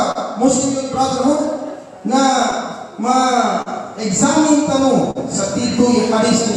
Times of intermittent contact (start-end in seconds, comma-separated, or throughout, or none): none